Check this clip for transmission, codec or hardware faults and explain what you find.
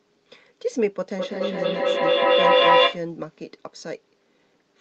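One fault is present: feedback echo between two devices, from 1.18 to 3.09 s. The speech comes round again about every fifth of a second, thinner and more ringing each pass, and the repeats build up to about 12 dB above the speech. A second device in the same room is playing this microphone's signal, which the microphone picks up again, and the echo canceller can't remove sound from another device.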